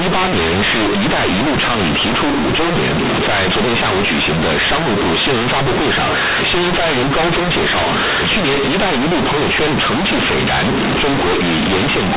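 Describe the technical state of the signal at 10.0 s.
At 10.0 s the speech is hit by companded audio read as linear, a fault present for the whole clip. The A-law telephone bytes are played straight as linear 8-bit samples with no expansion, so every sign change throws the output across roughly half its range. It sounds very loud and buzzy, with heavy noise in pauses. On a waveform the trace is a dense block with no quiet gaps. A spectrogram shows broadband smear filling the band up to the 4 kHz telephone limit.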